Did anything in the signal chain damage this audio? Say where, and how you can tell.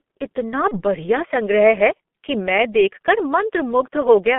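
Yes. At the codec stage, the whole clip carries G.723.1 codec damage: speech is confined to about 200 Hz to 3.4 kHz, sounds muffled and hoarse, and consonants smear. The heavy, slowly updating coloration points to a roughly 6 kbit/s coder working in 30 ms frames.

At the network stage, there is VoIP packet loss concealed by the speech codec from 0.68 to 0.84 s. The decoder repeated its last pitch and filter at falling gain, producing a fading stretch of extrapolated sound. The recovery lag beyond the gap fits a single lost 30 ms frame.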